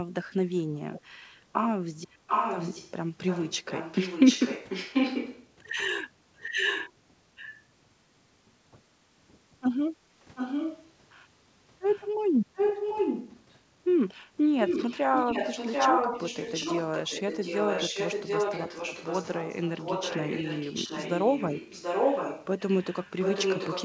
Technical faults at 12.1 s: echo leak

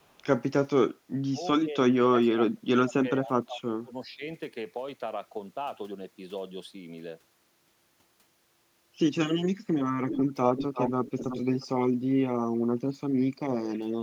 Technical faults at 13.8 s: none

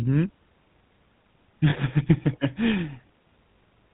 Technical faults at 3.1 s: GSM full-rate codec

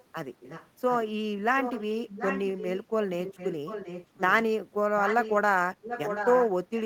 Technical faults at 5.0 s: echo leak

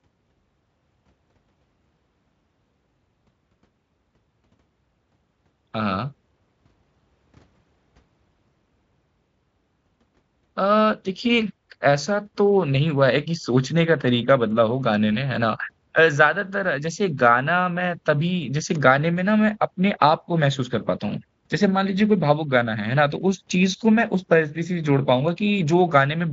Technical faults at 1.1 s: none

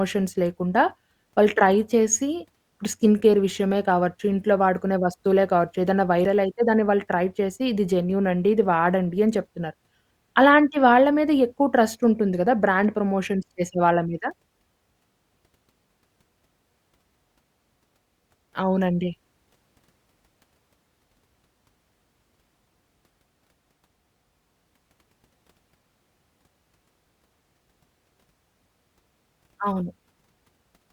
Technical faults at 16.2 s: audio missing between chunks

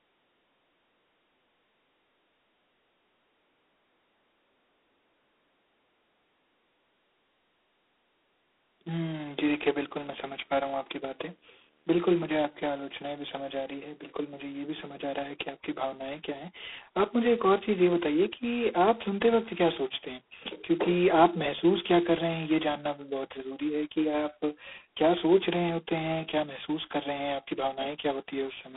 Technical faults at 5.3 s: G.726 ADPCM

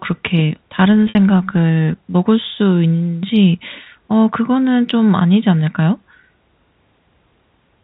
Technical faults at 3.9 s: packet loss with pitch repetition

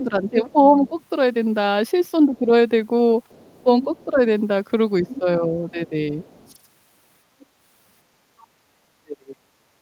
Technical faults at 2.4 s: speech suppressed in double talk

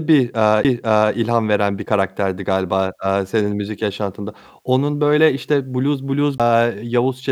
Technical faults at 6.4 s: CD skip

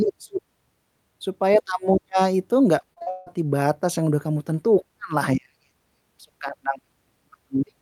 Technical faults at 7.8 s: none

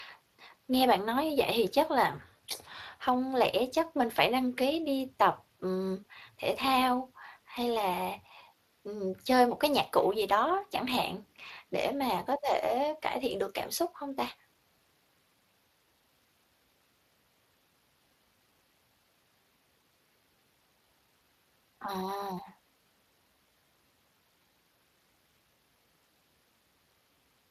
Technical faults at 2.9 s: Speex codec; drift correction step

